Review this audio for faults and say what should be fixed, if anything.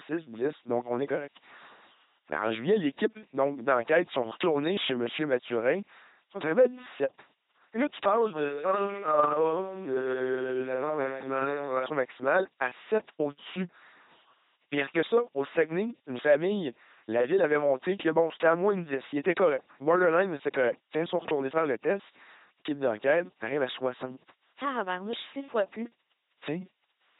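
A thin, steady buzz sits under the speech for the whole clip, at 100 Hz with a comb of harmonics and well below the voice. This is DECT cordless phone buzz: a nearby handset or base station transmits a radio burst every 10 ms, and the audio circuitry rectifies each burst into an audible pulse. To prevent it, keep DECT phones and base stations well away from microphones, preamps and cables.

Throughout, the speech sounds buzzy and mechanical, like a robot voice, with stray hiss or buzz where voiced and unvoiced sounds are misjudged, and nothing above 3.9 kHz. That points to an LPC-10 vocoder, heavily damaged, consistent with 2.4 kbit/s: each moment is synthesised from either a pulse train or noise through a ten-pole vocal-tract filter. To prevent it, record or transmit through a wideband codec at an adequate bitrate instead of a low-rate vocoder.

From 8.37 s, right after "tu passes", to 11.86 s, just before "maximale à", the voice abruptly turns roomy and hollow. 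It loses bass, drops about 5 dB and carries clearly more room noise. The likely cause is a switch to a distant microphone after the close mic's signal dropped out. To prevent it, secure and monitor the close microphone so its feed never drops.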